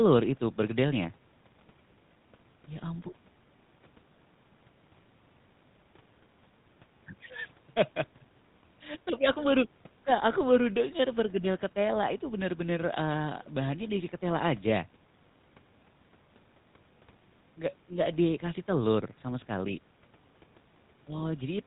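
The whole clip has passed through the GSM full-rate codec. It models the speaker's vocal tract and drives it with sparse, regularly spaced pulses. Nothing above 4 kHz survives. The speech sounds buzzy and gravelly throughout. The roughness is plainly audible, and it fits a 13 kbps stream.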